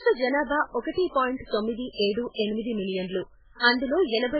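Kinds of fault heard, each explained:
MP3 compression: Heavy, likely MP3 coding runs through the whole speech clip. The encoder, short of bits, discards the treble entirely, so nothing is present above 4.8 kHz, and the extreme damage points to a very low bitrate, on the order of 8 kbps. Weak frequency lines drop in and out between frames, giving a watery, swirly texture, and s sounds turn metallic and chirpy while consonant onsets lose definition.
pre-echo: Two sharp onsets arrive with a short hiss just ahead of them, at 0.81 to 0.85 s, spreading about 36 ms, and at 2.12 to 2.17 s, spreading about 47 ms. The codec distributes its quantisation noise across an entire transform block. When a loud attack sits late in that block, noise scaled to the attack fills the quiet gap before it and leaves the onset smeared rather than crisp.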